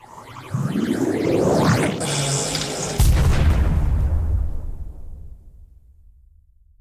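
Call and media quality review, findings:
No findings for this call and media quality review.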